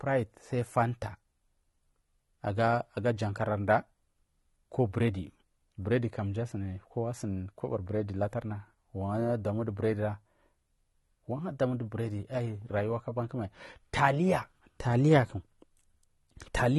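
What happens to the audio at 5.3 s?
At 5.3 s the speech carries the same AAC compression damage heard across the whole clip. Nothing reaches above 11.7 kHz, so the top sounds dull, and sibilants have a fizzy, warbling smear, likely from AAC-LC coding at a low rate that fits about 32 kbps. On a spectrogram, energy stops at a flat ceiling near 11.7 kHz. The waveform looks ordinary.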